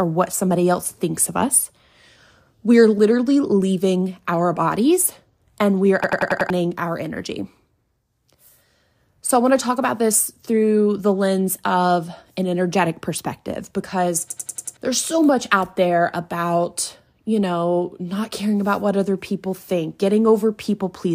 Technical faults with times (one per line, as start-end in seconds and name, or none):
6.04-6.50 system hang loop
14.30-14.77 system hang loop